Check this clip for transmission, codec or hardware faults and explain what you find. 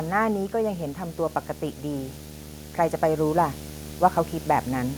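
There is one hardware fault here, video or display buzz, and it runs through the entire speech clip. A screen or its video cable is coupling interference into the audio path, injecting a buzz at the display's 75 Hz field rate with a layer of hash riding above it. The result is a steady, coarse drone sitting under the speech, quite prominent at roughly 10 dB below the signal, so it stays audible between phrases as well as beneath them.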